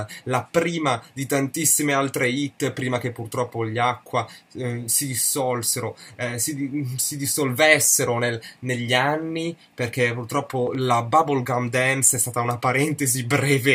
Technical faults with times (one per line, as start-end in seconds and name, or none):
10.67-10.77 loud pop